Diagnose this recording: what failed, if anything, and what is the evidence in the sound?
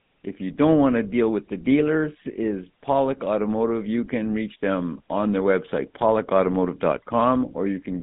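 The codec stage is the culprit: this speech has been through a GSM full-rate codec for the whole clip. You can hear it in the band, which sits roughly between 150 Hz and 3.6 kHz with nothing at all above 3.8 kHz, and in that plainly audible buzzy, gravelly grain. The coder rebuilds the voice from a vocal-tract model fed by a sparse, regularly spaced pulse train, which fits a 13 kbps GSM stream.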